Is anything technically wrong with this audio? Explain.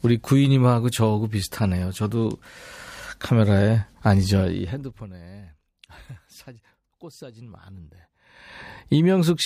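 Yes. From 4.4 to 5.2 s the level is pulled down by roughly 25 dB in unsmoothed 2 dB jumps, some twenty a second. This is zipper noise: each abrupt gain step puts a small click into the speech, so a fast ticking rides on it while it fades.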